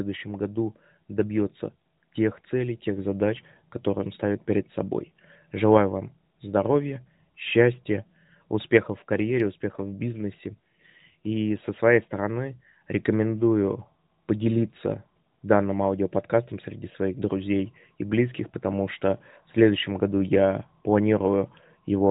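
No faults in the speech: the band-limited character, with nothing above 4 kHz, fits an AMR narrowband mobile codec working normally at light codec damage, consistent with its 12.2 kbps mode.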